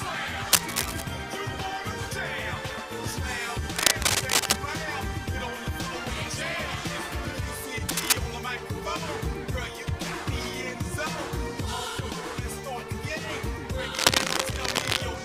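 Cable scratch noise appears four times: from 0.52 to 1.02 s, 3.76 to 4.58 s, 7.89 to 8.13 s, and 13.94 to 15.01 s. Each is a dense, uneven burst of scratching and rustling laid over the sound, sitting roughly 5 dB above it, so it dominates while it lasts. The likely cause is a worn cable, connector or control being moved, its contact resistance fluctuating rapidly and injecting ragged noise into the signal path.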